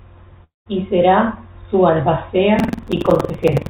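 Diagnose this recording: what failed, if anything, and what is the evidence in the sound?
Long network dropout, network stage, from 0.44 to 0.68 s. About 220 ms of the speech is missing. The gap opens with a decaying continuation of the last sound, a buzzy tail the receiver synthesises to cover the hole. It collapses into near-silence that runs for about 160 ms before the speech resumes further along, with the lost portion never recovered. The likely cause is a burst of packets that never arrived, which the jitter buffer could only paper over with fading concealment.

Buffer tearing, driver or buffer stage, from 2.55 s to the end of the clip. A rough, robotic rattle at 21.5 Hz rides on the speech and is present only while there is signal, which fits a 2048-sample ring buffer. The application writing that buffer and the hardware reading it have drifted into overlap, so each period carries a small slice, around a seventh, of audio from roughly a tenth of a second earlier. 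Hard splices on either side of that stale slice produce the periodic rattle. All of this sits on a narrowband call path with nothing above 4 kHz, consistent with G.711 mu-law coding at 64 kbps.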